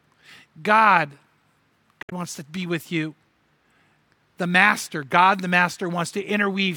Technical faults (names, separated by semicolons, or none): damaged data in a compressed stream